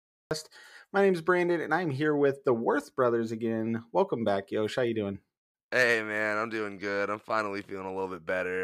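The speech opens with a cut-off start: digital silence runs from 0 to 0.31 s, then sound begins abruptly mid-utterance, as though capture began late. Unlike a slow fade-in or noise gate, there is no build-up, and unlike a dropout, nothing precedes the silence.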